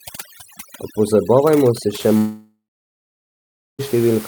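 From 0 to 2.0 s, a noise reduction stage set far too aggressively removes far more than the room's background, which sits about 16 dB below the speech. Individual frequency bands are pushed down or switched off whenever their level comes close to the noise estimate, and the softer parts of the speech fall below that threshold and vanish with them. This is overdone noise removal. The background collapses to near silence dotted with twinkling specks.

From 2.17 to 3.81 s, a long network dropout is the likely cause of the break. The receiver stopped getting audio for about 1.6 s and extended the last sound it had as a fading buzz or hiss. After that ran out, roughly 1.2 s of silence or a flat low noise remains. The audio returns at 3.81 s with the missing 1.62 s simply gone, so the speech jumps forward rather than resuming where it stopped.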